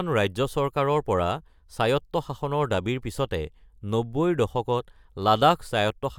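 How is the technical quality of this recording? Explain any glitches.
Nothing jumps out here; the speech comes through without any glitches to explain.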